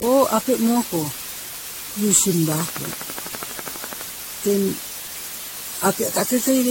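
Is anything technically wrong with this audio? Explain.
Yes, two faults run through the whole speech clip.

Low bit depth with dither is present from start to finish. The signal is rounded to very few levels, consistent with about 5 bits. Dither turns that error into a steady, even hiss, roughly 15 dB below the speech, with no distortion.

Generation loss also spans the entire clip. The sound is swirly, smeared and hollow, and consonant attacks blur. Nothing is present above 16.6 kHz. The likely cause is repeated re-encoding, around seven times, in a chain consistent with 64 kbit/s AAC-LC. Each pass adds fresh noise and spectral holes.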